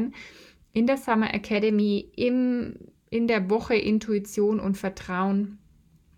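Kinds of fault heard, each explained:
Drift correction step: from 1.56 s to 2.89 s the speech suddenly runs about 6.1% fast and rises by 103 cents, just over a semitone, so speed and pitch lift together for about 1.3 s before snapping back to normal right before "in der". This is likely clock-matching software abruptly changing the playback rate in a single step to drain or refill its buffer, rather than easing the rate gradually.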